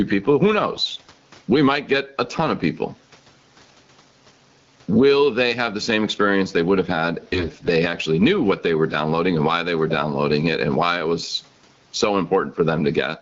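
Gain pumping runs through the whole speech clip. The level swings by about 15 dB, with the room noise normally far below the speech. The likely cause is input gain set much too high, with a fast limiter clamping each peak. Loud and soft passages end up squashed close together.

AMR bit errors appear from 0.73 to 1.08 s and again from 7.33 to 7.70 s. Across those stretches, roughly a tenth and then somewhat fewer of the weakly protected bits in the AMR-WB frames arrive flipped, while the core bits still pass their checksum. The decoder misplaces its excitation pulses and gets fine gain and spectral values wrong. Pitch and loudness hold roughly steady, but the voice turns hoarse, scratchy and gargly.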